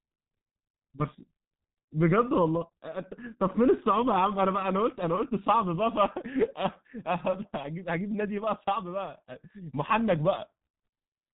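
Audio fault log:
throughout, G.723.1 codec: the speech sounds muffled and hoarse, with consonants smeared together and no brightness at all, since nothing survives above about 3.8 kHz. The rough, buzzy quality comes from heavy coding damage: this low-rate telephony codec, at a rate that fits roughly 6 kbit/s, works in 30 ms frames and refreshes its model of the voice only slowly, so quick changes such as consonant onsets blur into the surrounding sound.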